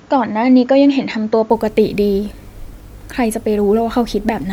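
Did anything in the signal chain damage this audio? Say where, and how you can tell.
Yes. From the start to 1.5 s the speech sounds dull and a bit boxy, with nothing above 7.2 kHz and a faint extra noise floor roughly 45 dB down. Then it opens up, with no gap or level jump. That's likely an input switched to a poorer device at capture.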